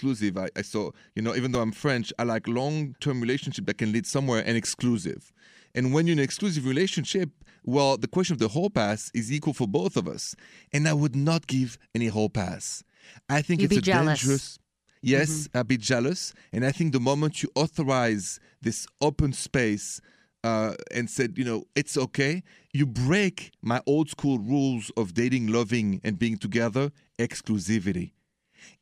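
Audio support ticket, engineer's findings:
Repeated buffer, 1.55 s, between "saw you know even" and "i'm french i like": single 5 ms block played twice, hard join, heard as a brief click. Playback buffer starved, so the device replayed its last block, which fits a 5 ms buffer. Repeated buffer, 12.92–12.94 s, after "give any whole pass", before "i think": same 5 ms block looped four extra times, a short buzz at about 200 Hz, with roughly 20 ms of audio lost. Same underrun mechanism, longer stall.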